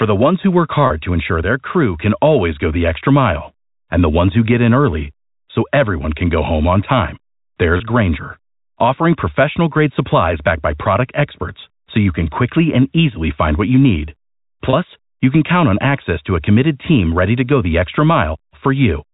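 Three 30 ms gaps in the packet stream occur at 0.87 s (between "the ones who work" and "to ensure their crew"), 7.77 s and 14.7 s (between "find what you need" and "you can count on"). Each fits a single lost packet. The receiver bridges each hole with packet loss with pitch repetition, looping the last pitch period, so the speech briefly holds a slightly buzzy, frozen tone before carrying on through the narrowband G.711 telephone line.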